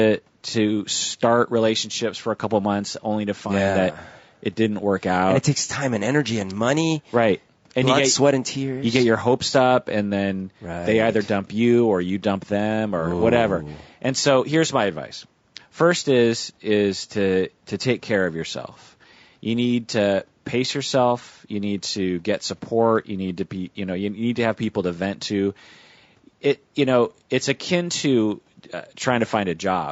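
Across the whole clip, the speech sounds rough and grainy. Noise fills the gaps between the voice's harmonics, and the top band sounds dulled and synthetic. The likely cause is low-delay AAC compression, AAC-ELD, at a bitrate that fits about 32 kbps. Its short frames resolve pitch poorly. Faint room noise sits about 43 dB below the speech.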